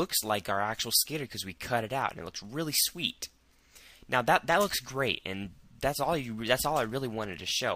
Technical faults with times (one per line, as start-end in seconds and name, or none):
1.75-7.75 block size mismatch (truncated)